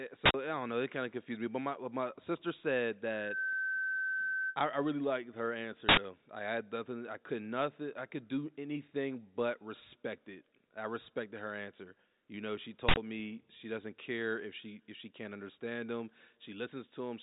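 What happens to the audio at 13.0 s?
A short, very loud burst of digital noise cuts across the speech from 12.89 to 12.97 s, lasting about 85 ms. This is an uninitialised buffer: a block was played before any audio was written to it, so stale memory came out as samples. The span fits a 4096-sample block.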